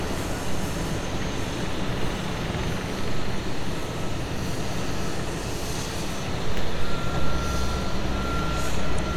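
Near the end, from 8.95 to 8.99 s, there is damaged data in the compressed stream. For about 44 ms the decoder meets bytes it cannot read as valid frames. It loses its place and hunts for the next frame header before playback resumes. The result is a brief chirp, squawk, click or short hole. The audio then picks up again.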